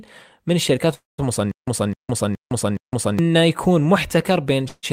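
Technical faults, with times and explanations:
0.94–1.20 s, call audio freeze: the last sound is stretched into a fading buzz, then 0.17 s of silence, likely from delayed packets emptying the jitter buffer; nothing is lost.
1.51–3.19 s, stutter with silent gaps: a 0.26 s burst repeats four times every 0.42 s with 0.16 s of silence between, likely a stalled stream replaying its last fragment.
4.68–4.85 s, call audio freeze: a 0.15 s gap is inserted and ends in 0.04 s of silence, likely from late packets; the audio resumes without missing anything.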